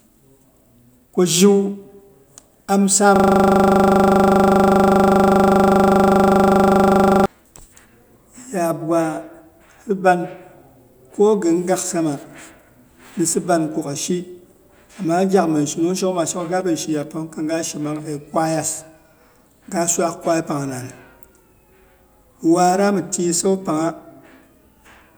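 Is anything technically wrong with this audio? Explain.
Yes. From 3.16 to 7.26 s the speech freezes into a system hang loop: a driver stall left the hardware replaying one 40 ms buffer about a hundred times, producing a steady 25 Hz buzz. Unlike irregular underrun stutter, every repeat is exactly identical.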